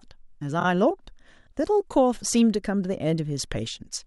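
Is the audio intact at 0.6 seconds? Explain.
No, there is a repeated frames fault from 0.59 to 0.65 s. A stretch of speech about 26.1 ms long, which fits a single compressed frame, is played twice more after its first pass, adding 52.2 ms to the audio. It sounds like a brief mechanical stutter. Unlike an echo, which decays, each copy returns at full level, and unlike a dropout, no sound is lost.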